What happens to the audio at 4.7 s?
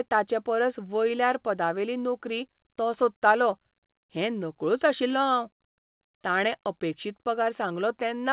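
Nothing goes wrong at 4.7 s: the speech carries on intact through the call path, with its usual narrowband telephone sound and nothing above 4 kHz.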